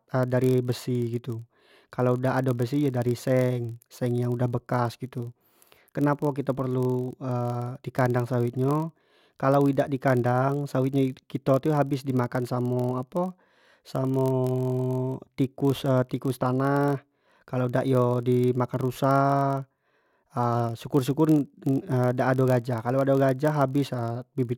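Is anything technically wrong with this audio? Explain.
Yes. Throughout the speech there is a block size mismatch (padded). Each block arrives slightly short and is zero-filled to a read size that fits 1024 samples. The tiny gaps produce a steady 43.1 Hz buzz, and the audio plays at 0.999 speed.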